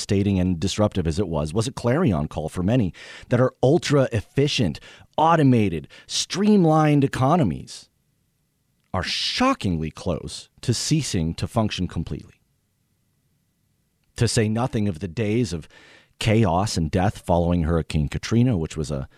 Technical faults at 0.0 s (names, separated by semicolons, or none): none